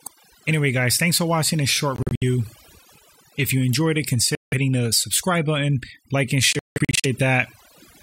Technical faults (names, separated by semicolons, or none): overdone noise removal; Bluetooth dropout